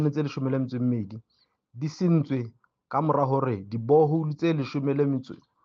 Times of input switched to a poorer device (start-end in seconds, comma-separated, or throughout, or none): none